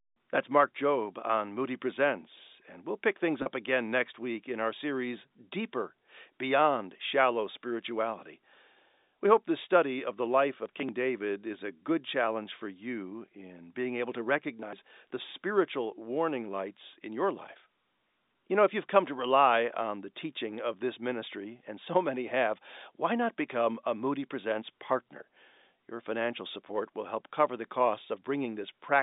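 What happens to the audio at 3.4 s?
Packet loss with pitch repetition strikes from 3.42 to 3.46 s: about 40 ms of audio goes missing, which fits four 10 ms packets, and the receiver fills the gap by looping the last pitch period. The sound briefly hangs as a slightly held, buzzy tone before normal speech resumes.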